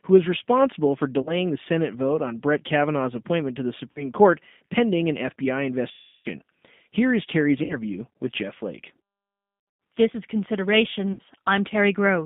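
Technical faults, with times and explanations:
Throughout, G.729 codec: the speech is intelligible but rough and slightly synthetic, confined to roughly 150 Hz to 3.7 kHz. An 8 kbit/s coder rebuilds each 10 ms frame from a vocal tract filter, a pitch predictor and a few pulses, discarding everything above 4 kHz.
1.22–1.32 s, VoIP packet loss concealed by the speech codec: just after "who is responsible for", about 40 ms of speech gives way to a brief buzzy smear. Two packets were lost, and the decoder extended its last pitch and filter at falling gain.
3.92–4.10 s, VoIP packet loss concealed by the speech codec: after "appointment to the", a short stretched, buzzy tone replaces about 40 ms of speech. Two packets were lost and the decoder extrapolated the previous frame, and the speech takes a moment to firm up afterwards.
5.91–6.27 s, VoIP packet loss concealed by the speech codec: the longest dropout, with about 340 ms of speech replaced by a drawn-out buzz fading into coloured noise. 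Seventeen packets were lost, so the decoder's guess from the last frame was repeated and attenuated until nearly silent.
7.64–7.80 s, VoIP packet loss concealed by the speech codec: a short buzzy stretch where about 60 ms is missing. Three packets were lost; the decoder carried its last pitch and filter forward, and the speech recovers weak and distorted since each frame builds on the last.
9.60–9.80 s, VoIP packet loss concealed by the speech codec: a broken, stuttering patch over 200 ms, with about 180 ms lost in scattered gaps, the longest 100 ms. Nine packets went missing, and repeated concealment between them leaves the speech buzzy and unstable.
11.13–11.21 s, VoIP packet loss concealed by the speech codec: about 60 ms turns into a brief tonal smear that fades. Three packets were lost and the decoder extrapolated the last pitch and filter at dropping gain, leaving the speech thin as it resumes.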